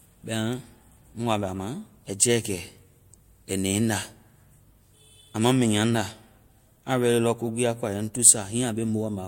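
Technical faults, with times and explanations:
Throughout, transcoding between lossy codecs. The speech carries two sets of coding artefacts heard together. The sound points to an MP3 encode at about 96 kbit/s, likely followed by a Vorbis encode at about 64 kbit/s. The second codec spends its limited bits reproducing the first codec's damage. It then adds its own. Nothing is present above 20.7 kHz. That is the lowest cut-off in the chain, and it remains in the final audio.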